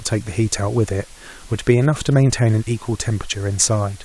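Low bit depth with dither runs through the whole clip, from start to finish. The speech has been reduced to just 8 bits, and a small random signal was added before each sample was rounded, so the rounding error no longer tracks the waveform. Instead it spreads into steady white noise, sitting roughly 25 dB below the speech. The result is a constant, even hiss under every syllable and pause, with no gritty distortion.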